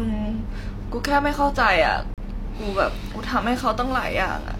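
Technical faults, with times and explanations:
2.14 to 2.18 s, gap between stream segments: the speech stops dead for about 38 ms where two segments' timestamps don't meet, and the player fills the hole with silence.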